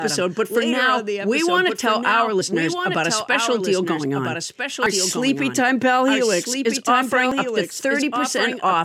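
A speech recording carries two faults. The audio was most likely captured twice, once through a slower path, so a second full-band copy runs about one and a half seconds behind the original, a few decibels quieter, with no decay or room colour, and doubles the speech throughout. The recorder also likely handles audio in 2.5 s chunks and drops around 50 ms each time it closes one and opens the next. The edges are butted together with no silence, producing abrupt skips at 2.41 s, between "want to tell our" and "about a special deal", at 4.86 s, just after "special deal going on", and at 7.32 s.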